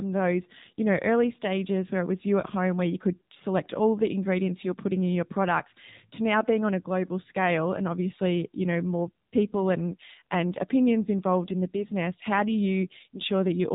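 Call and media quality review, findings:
AMR narrowband mobile codec damage across the whole clip. Speech is band-limited, with nothing above 3.8 kHz, and has a plainly audible buzzy, synthetic timbre. On a spectrogram there is a hard ceiling at 3.8 kHz and smeared harmonics in 20 ms blocks. The vocal-tract model is driven by sparse pulses, which fits a low AMR-NB mode near 7.4 kbps.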